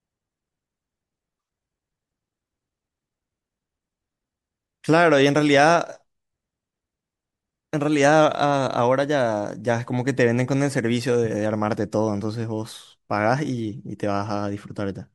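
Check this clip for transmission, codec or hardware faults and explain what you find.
No faults detected in this recording.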